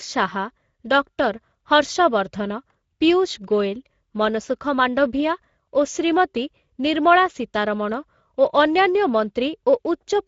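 Speex codec damage runs through the whole clip, from start to finish. The CELP coder has too few bits for the excitation, which fits a bitrate near 17 kbps, so the speech sounds noisy and hoarse, with nothing above 7.6 kHz and a thin, noise-like upper band.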